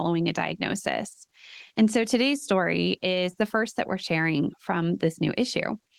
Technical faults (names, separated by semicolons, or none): none